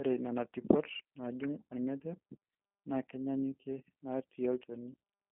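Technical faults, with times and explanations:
Throughout, G.729 codec: the speech sounds thin, slightly rough and synthetic, held to about 200 Hz to 3.5 kHz with nothing above 3.7 kHz. The coder rebuilds each frame from a vocal-tract filter, pitch predictor and sparse pulses, which fits G.729A at 8 kbit/s.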